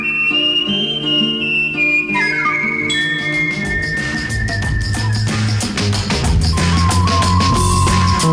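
No technical faults can be heard anywhere in the music. There is no point in the audio that needs a timestamp.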